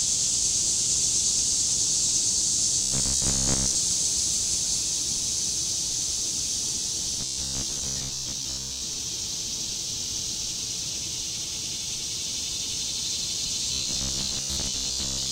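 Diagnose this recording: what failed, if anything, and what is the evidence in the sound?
A rigid, metallic 66.7 Hz buzz at 2.82 to 3.76 s, 7.21 to 8.81 s and 13.73 to 15.31 s is robotic sound from repeated short buffers. A driver or buffer stage is likely repeating 15 ms chunks and skipping most of the real audio.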